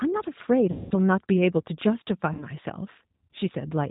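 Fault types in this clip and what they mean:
G.729 codec: The speech runs through an 8 kbit/s codec that rebuilds it from a vocal tract filter, a pitch predictor and a few pulses per frame. Nothing above 4 kHz survives, and the voice is plainly rough and synthetic throughout, though intelligible.
VoIP packet loss concealed by the speech codec: About 200 ms of audio is lost from 0.71 to 0.94 s, and 60 ms from 2.33 to 2.44 s. The decoder fills each gap by repeating its last pitch and filter at falling gain, giving a buzzy or noisy, fading stretch before the speech recovers.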